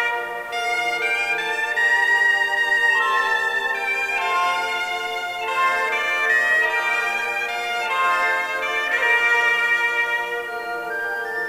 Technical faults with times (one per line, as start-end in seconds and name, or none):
none